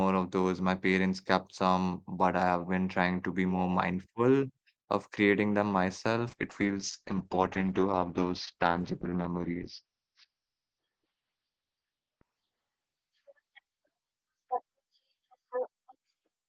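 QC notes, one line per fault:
6.28 s to end: call bitrate drop from 32 to 8 kbps; speech goes coarse and muffled, band squeezed from 20 to 6 kHz.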